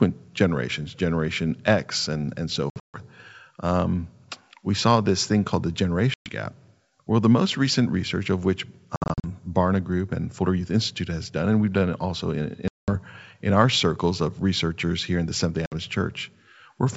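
Packet loss on an ADPCM call punches hard-edged silent gaps at 2.70, 6.14, 8.96, 12.68 and 15.66 s. The desynchronised decoder then resumes speech slightly distorted until it settles.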